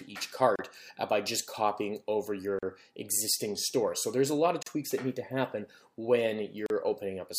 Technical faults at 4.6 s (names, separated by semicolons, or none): gap at a join of encoded pieces